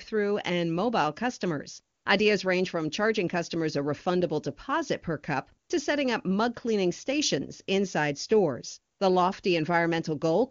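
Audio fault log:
1.95–2.05 s, 5.67–5.69 s and 8.93–8.99 s, AMR comfort noise: in these three short pauses, lasting 100 ms, 20 ms and 60 ms, the phone judged the talker silent and sent no speech frames. The receiver filled each gap with synthetic noise built from a rough sketch of the background's level and spectrum, so the real background briefly gives way to a smooth, even hiss. The clean wideband speech around these pauses fits the highest AMR-WB rate of 23.85 kbit/s.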